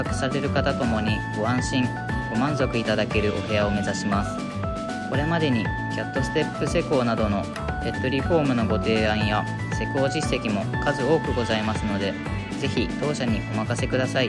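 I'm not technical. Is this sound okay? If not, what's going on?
Yes, this sound is okay. Nothing in it points to a technical problem that needs attention.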